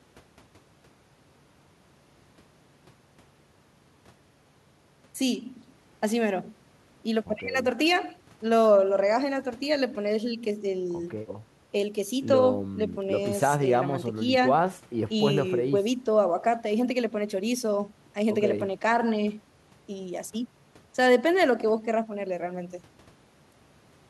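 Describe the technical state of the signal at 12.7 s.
At 12.7 s the speech signal is intact, with no dropout, distortion, glitch or other technical fault at that point.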